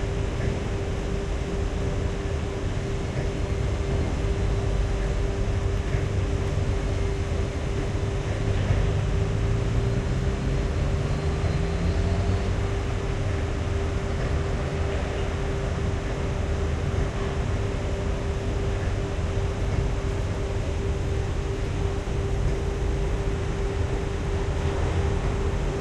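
Three single sharp clicks sit at 5.78, 7.88 and 10.33 seconds, each a brief tick with no gap in the sound around it. These are likely dropped samples: a tiny run of samples, a fraction of a millisecond, is missing from the stream, so the waveform jumps straight from one value to a later one. That step is too short to remove anything audible, but the discontinuity spreads energy across the whole spectrum as a thin vertical line, heard as the click.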